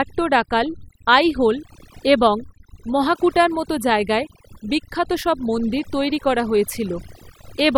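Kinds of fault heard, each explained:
Overdone noise removal: a noise reduction process was driven too hard on this speech, and it runs the whole way through. Frequency bands that sit close to the tool's noise estimate are pulled far down or shut off entirely, and the quieter components of the voice are caught along with the noise. The gaps between phrases drop to near silence scattered with small twinkling specks.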